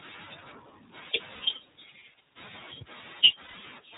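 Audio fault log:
throughout, iLBC codec: The speech sounds band-limited and boxy, with a plainly rough, slightly synthetic edge and nothing heard above 4 kHz. This is narrowband iLBC coding, where each frame's excitation is coded on its own, which fits the 30 ms, 13.33 kbps mode.
1.35–1.41 s and 3.42–3.55 s, lost iLBC frames: The speech briefly turns into a held, buzzy, breathy vowel, for about 60 ms and then about 120 ms, before snapping straight back. Missing packets, which fit two and four 30 ms frames, were concealed by repeating the last pitch cycle mixed with noise.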